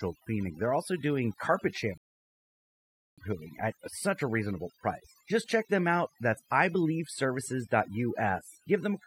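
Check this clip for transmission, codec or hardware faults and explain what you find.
Two faults are audible in this speech clip: overdone noise removal throughout, and a rebuffering stall early on.

Across the whole clip the background drops and breaks up into twinkling, warbling specks. This is overdone noise removal. A noise reduction stage set too strong keeps pushing individual frequency bands down or off whenever they sit close to its estimate of the noise. The quieter parts of the voice fall under that threshold and are stripped away along with the hiss.

From 1.98 s to 3.18 s the sound drops to silence, then picks up exactly where it left off, with nothing missing. This is a rebuffering stall. The player used up its downloaded audio and paused until more data arrived. The gap adds about 1.2 s to the running time without removing any of the speech around it.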